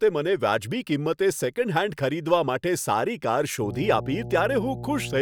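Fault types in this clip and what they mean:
Mains hum: from 3.60 s to the end, a steady 60 Hz tone fairly loud under the speech, from power-line current leaking into the signal path.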